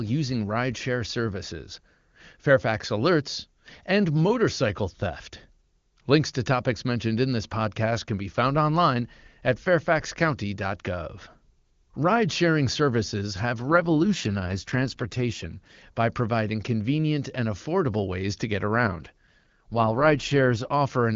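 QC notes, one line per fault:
13.59–15.83 s and 18.76–20.73 s: AMR rate drop. Speech turns rough and synthetic without gaps or band loss, fitting a fall from 23.85 to 8.85 kbit/s.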